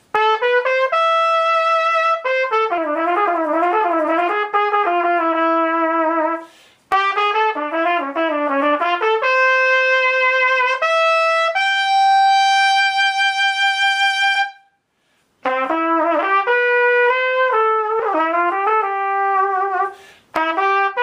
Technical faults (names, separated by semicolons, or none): compressed frames skipped